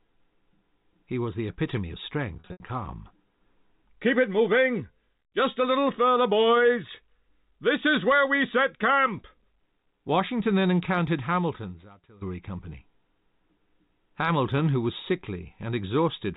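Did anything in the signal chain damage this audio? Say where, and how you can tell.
Yes. The network stage dropped packets just after "was the epitome of", from 2.40 to 2.60 s. About 140 ms of audio went missing, scattered across that 200 ms stretch, with the longest gap around 80 ms. That pattern fits roughly seven 20 ms packets. The receiver concealed each hole by repeating the last pitch period, so the sound briefly holds on a buzzy, frozen tone, fades, and then cross-fades back in. That is packet loss with pitch repetition.

The second fault is a loudspeaker feedback squeal in the acoustic path, where a microphone picks up a loudspeaker that it feeds. At 4 kHz the loop gain exceeds one, and a single tone grows on its own. It starts at 4.78 s and swells over about half a second to roughly the level of the speech, then stops at 5.52 s, just before "a little further boys". It returns from 10.35 to 12.25 s, this time building more slowly over about a second and a half. 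The line's G.711 A-law telephone coding leaves only faint traces of its own.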